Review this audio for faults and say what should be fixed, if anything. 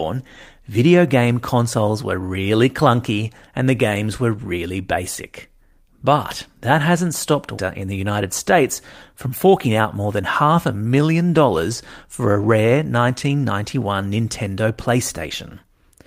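At 7.57 s the speech lurches forward. Roughly 0.7 s of it is simply gone, and the two sides are butted together with no filler or fade. This is a skip ahead: a stretch of audio was discarded, either lost in transit or thrown out when an overfull jitter buffer had newer audio waiting, so playback jumped ahead and the playout delay shrank by about the same amount. Preventing it requires sizing the jitter buffer with enough headroom that bursts can be absorbed and drained gradually rather than dropped.

Shortly afterwards, from 7.81 to 8.64 s and again from 9.13 to 9.99 s, the speech sounds slightly rushed while its pitch stays put, running at 107% and then 105% of normal pace. This is jitter buffer speed-up. The buffer was holding more audio than its target, so the receiver repeatedly snipped out short pitch-period-length pieces, about 70 ms in the first stretch and 50 ms in the second, to pull the delay back down. 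Preventing it requires smoothing network delay variation so late packets don't arrive in clumps that overfill the buffer.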